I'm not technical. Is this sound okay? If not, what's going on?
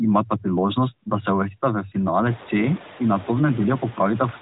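No, not quite. There are noise suppressor artifacts all the way through. A cleanup step keeps pushing the background noise down between words and letting it back up under them. The room also gets louder around two and a half seconds in.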